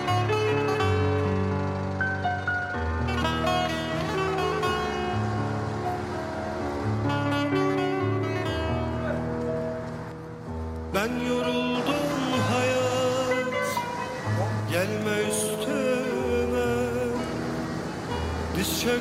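Nothing in this audio stands out as a technical problem; it simply runs along without a hitch the whole way.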